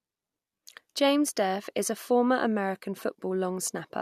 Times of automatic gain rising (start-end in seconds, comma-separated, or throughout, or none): none